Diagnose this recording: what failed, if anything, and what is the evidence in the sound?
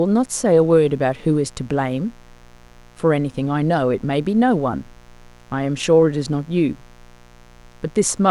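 The analogue wiring failed, letting mains buzz into the signal. A steady, raspy buzz runs under the speech from start to finish. It sits roughly 30 dB below the speech. The buzz is built on 60 Hz. Sharp switching spikes from a dimmer, rectifier or broken shield arrive twice per mains cycle. Their harmonics climb well into the kilohertz range, which gives the buzz its edge rather than a pure hum.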